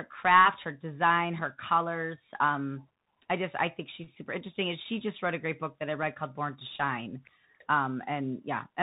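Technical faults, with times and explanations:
Throughout, Bluetooth CVSD headset codec: the speech is confined to a narrow telephone band with nothing above 4 kHz, and the damage is plainly audible. The sound points to a 64 kbit/s CVSD link, where each sample is a single up-or-down bit and the step size adapts as it goes. Loud high-frequency sounds outrun that step and distort, s sounds come through scratchy, and a granular hiss sits beneath the speech.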